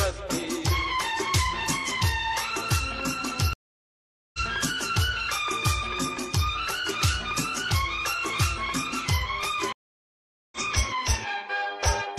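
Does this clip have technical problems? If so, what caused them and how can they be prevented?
Yes, there are two stream reconnects. At 3.53 s the audio drops into about 0.8 s of silence and comes back at 4.40 s, having skipped ahead by roughly 0.7 s. The same thing happens from 9.72 to 10.58 s, with a jump of around half a second. Each time the connection broke, the player reconnected to the live stream and started a fresh decoder, so playback picked up wherever the stream had moved on to. A bigger receive buffer and a client that resumes from its last position instead of the live edge would keep these short dropouts from being heard.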